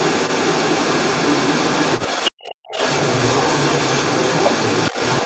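A second voice runs under the talker from start to finish of this speech recording, sitting a little louder than the talker. This is the other side's voice leaking through, likely because the talker's loudspeaker fed back into the microphone and the echo canceller left a residue. Unlike room reverberation, which smears the talker's own voice, this is a separate voice with its own timing, often thin or chopped. The talker also drops out in two places. From 2.28 to 2.60 s the voice falls almost to silence, and at 4.91 to 5.00 s it dips more modestly. This is speech suppressed in double talk, most likely the canceller turning everything down while both sides talked at once. Packet-loss dropouts strike at random, but these dips line up with the leaked voice being active.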